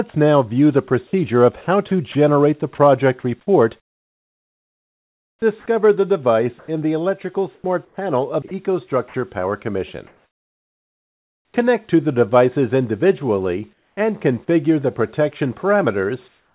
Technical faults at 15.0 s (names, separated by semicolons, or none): none